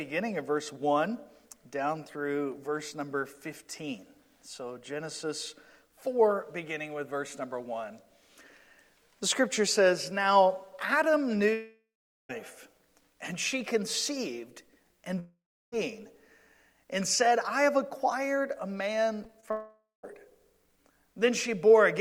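At 11.53 s the stream likely stopped arriving for about 0.76 s, a long network dropout. The receiver stretches the last sound into a fading buzz, which after a few tenths of a second gives way to roughly 0.4 s of silence. The audio resumes at 12.31 s with that stretch simply gone. The same thing happens from 15.19 to 15.74 s: a 0.54 s hole, a brief smeared tail, then about 0.32 s of silence before the sound returns.

From 19.24 to 19.49 s, packets go missing again and again. This is repeated packet loss, producing robotic sound. Several short holes, the longest about 20 ms, are each patched by continuing the last sound, and together they cover about a fifth of that quarter-second. The result is choppy, with pieces missing. It leads straight into a third long network dropout from 19.51 to 20.05 s, where about 0.52 s is lost: the concealment buzz fades and leaves roughly 0.15 s of silence before the audio comes back.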